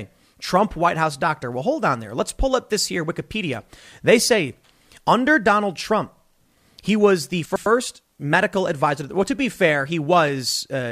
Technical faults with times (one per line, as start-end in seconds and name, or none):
7.45-7.66 frames out of order